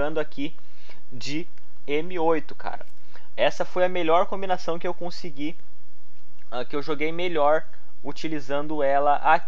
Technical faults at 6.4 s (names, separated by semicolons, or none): none